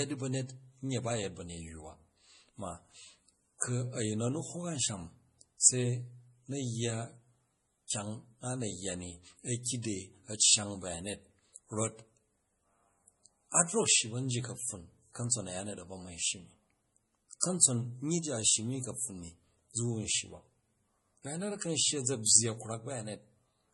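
MP3 compression runs through the whole speech clip. Nothing remains above 11.4 kHz, and the sound is heavily watery and swirly, with smeared consonants. This likely comes from an MP3 encoder at a very low bitrate, around 32 kbps, cutting the treble and dropping weak frequency lines frame by frame. Pre-echo occurs at 3.58–3.62 s, at 7.88–7.90 s just before "kyang a na yya", at 9.63–9.66 s, at 17.40–17.43 s before "kamtson nyyi ji a", and at 22.23–22.26 s after "shyi a̱za". Each is a brief hiss of about 26 to 38 ms ahead of a sharp attack, because quantisation noise spreads across the whole transform block.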